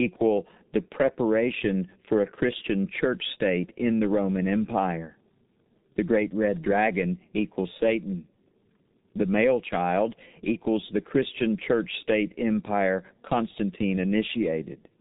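Throughout the speech, the G.723.1 codec leaves nothing above 3.8 kHz and a heavy, muffled, hoarse texture with smeared consonants, which fits a stream of about 6 kbit/s. Unlike a plain low-pass filter, the voice model updates sluggishly, so consonants blur.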